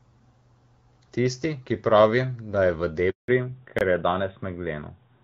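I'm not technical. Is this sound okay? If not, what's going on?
No. Right after "pravi da je v", at 3.10 s, there is a handover gap: the call switched networks and the voice fades out into 0.18 s of silence, rather than snapping off sharply.

From 3.28 s to the end, a fallback to narrowband makes the voice duller and rougher. Everything above 4 kHz is gone. Unlike a brief dropout, this lasts for the rest of the call. Before it, the clear HD Voice sound can be heard.

At 3.79 s, a block of digital silence cuts a 23 ms hole. It starts and ends abruptly, so it sounds harder and shorter than the handover gap.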